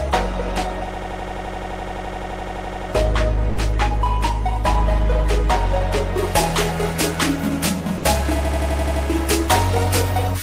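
From 0.94 to 2.90 s a system hang loop occurs: the computer or driver stalled while the sound hardware kept replaying its ring buffer. One 85 ms slice, which fits a 4096-sample buffer, repeats 23 times at 11.7 Hz, giving a rapid machine-gun stutter.

At 3.50 s the sound gives way to comfort noise for 80 ms, likely sound dropped by the voice detector: the sender's detector judged the passage to be background and stopped transmitting until it triggered again.

From 6.18 s to the end, pre-emphasis is left on. A 75 µs treble boost was never matched by its de-emphasis cut, so highs stand about 13 dB above 1 kHz at 10 kHz, and the sound turns thin, bright and sibilant.

At 7.98 s the same voice-detector dropout recurs for 60 ms, with comfort noise in place of the sound. From 8.45 to 9.05 s the hang loop returns, with the same 85 ms slice stuttering seven times at 11.7 Hz.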